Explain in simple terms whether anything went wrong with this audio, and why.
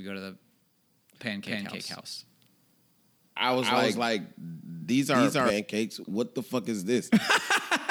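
Yes, something went wrong. From 1.46 s to 5.50 s the speech is heard twice. A second copy runs about a third of a second behind the first, at roughly the same loudness. This is a doubled audio track. It does not sound like a room echo, because the copy does not fade or soften. It switches on and off abruptly. The likely cause is the same sound being picked up again through a slower path and mixed back in.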